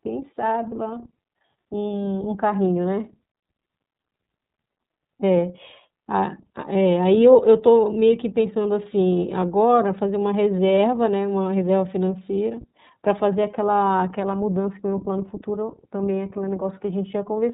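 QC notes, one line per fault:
Throughout: iLBC codec. The speech is cut to narrowband, with nothing above 4 kHz. Each 30 ms frame's excitation is coded on its own, so the sound is plainly rough and synthetic. This fits the 13.33 kbps mode.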